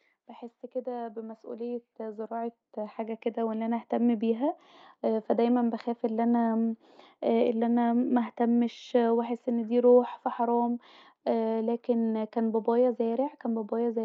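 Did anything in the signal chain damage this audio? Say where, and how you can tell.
Yes. Automatic gain rising in call processing: from 0.71 to 4.23 s the AGC lifted speech and background together by about 12 dB, so the waveform envelope ramps steadily upward.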